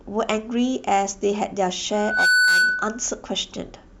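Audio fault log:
1.93–3.10 s, loudspeaker feedback squeal: the microphone was picking up the loudspeaker it was feeding, and at 1.5 kHz the round trip through the loop gained more than it lost, so that frequency fed on itself. A single 1.5 kHz tone rises out of the speech over roughly a third of a second and settles at around 10 dB above it. It holds as a steady piercing whistle for just under a second before it stops.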